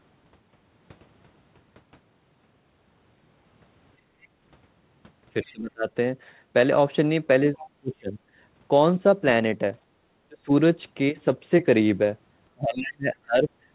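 At 3.98 s the room background suddenly sinks by about 9 dB and stays down for about 0.2 s before returning at 4.18 s. This is background gated by the echo canceller: while the loudspeaker was playing, the canceller clamped the microphone gain hard, taking the ambient sound with it, then let go once the loudspeaker fell quiet.

Right after, from 4.22 to 4.27 s, a faint fragment of a second voice slips in at around 35 dB below the main speech. The same kind of brief, quiet scrap returns from 5.43 to 5.52 s, and again from 7.59 to 7.67 s, this time noticeably stronger at around 20 dB below the speech. This is the other side's voice leaking through, likely because the echo canceller did not fully remove the loudspeaker signal picked up by the microphone.

The main speech itself caves in four times: 5.42 to 5.87 s, 7.8 to 8.18 s, 10.28 to 10.51 s, and 12.54 to 13.49 s. Each time the voice sags steeply, by something like 25 to 35 dB at its deepest. 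The last and longest stretch lasts about a second. This is speech suppressed in double talk, likely because both ends spoke at once and the canceller, unable to separate its own talker from the echo, turned everything down. Throughout, the audio is band-limited to 4 kHz, which fits the G.711 mu-law call path at 64 kbps.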